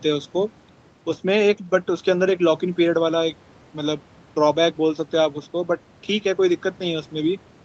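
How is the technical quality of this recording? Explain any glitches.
No glitches can be heard in this speech recording. Its sound stops at about 8 kHz, which fits the wideband setting of an Opus call codec, and the call microphone processing has taken out only the lowest bass.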